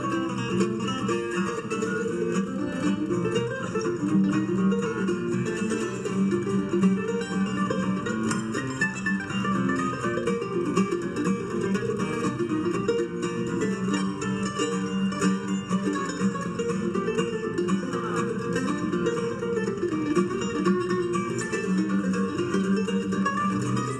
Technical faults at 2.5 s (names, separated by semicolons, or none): channel delay (comb filtering)